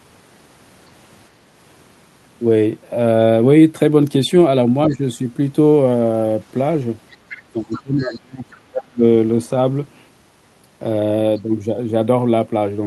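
Speech with two echo-canceller faults. Speech is suppressed in double talk at 4.89–5.02 s, a brief dip of around 10 dB, and again at 7.48–9.03 s, where it falls by around 35 dB. The likely cause is the canceller turning down the near talker while the far side speaks. The waveform shows a pinched envelope, and the spectrogram shows energy fading. The other side's voice is leaking through at 7.1–7.42 s and 7.71–8.15 s, sitting roughly 20 dB below the speech. This is likely residual loudspeaker echo the canceller missed, and it shows on the spectrogram as faint harmonic traces.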